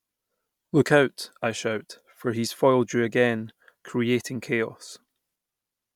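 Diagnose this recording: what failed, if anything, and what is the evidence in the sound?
Nothing failed here; listening along, no stage in the chain, from the wiring through to playback, leaves any mark on the speech.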